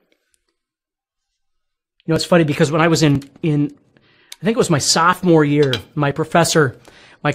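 Tiny skips come at 1.17, 2.16, 3.15, 4.14, 5.13 and 6.11 s, each a momentary jump where a sliver of the audio drops out, between about 5 and 11 ms long. Their near one-second spacing points to overlap between stream segments. Consecutive segments of about one second carry time stamps that overlap, and the player discards the overlapping stretch even though that audio was never duplicated, so the waveform leaps ahead at each boundary.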